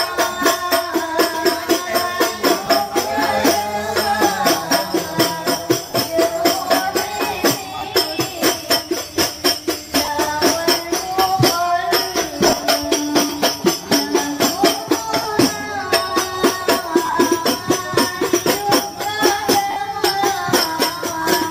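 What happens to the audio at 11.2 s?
Nothing goes wrong at 11.2 s; the audio plays through that moment intact, with no dropout, click or distortion.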